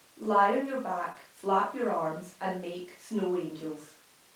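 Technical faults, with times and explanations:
1.12–1.15 s, short concealed packet loss: a brief smear between "on your" and "flap your arms and"; audio arrived too late, so the receiver bridged about 19 ms by extending the preceding sound.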